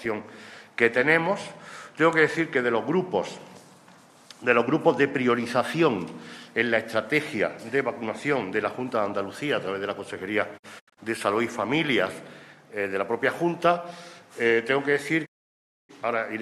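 At 10.57 to 10.99 s a digital broadcast dropout punches short silent holes, the longest 72 ms, then at 15.25 to 15.91 s mutes outright. The receiver stopped getting valid frames and muted with 20 ms fades, giving clean silence rather than analogue hiss.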